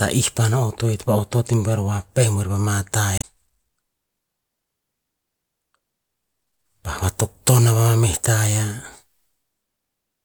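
At 3.18 to 3.25 s the speech is interrupted by a short burst of damaged data in the compressed stream. Corrupted bytes leave the decoder misreading frames and losing sync until it finds a valid frame header, producing a brief glitch lasting about 70 ms.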